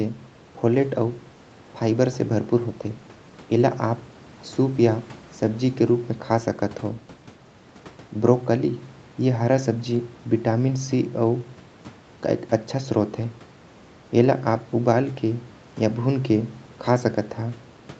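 Nothing stood out on listening to this speech; the call microphone processing and a low level of room noise, about 28 dB beneath the speech, are both what you would expect to hear.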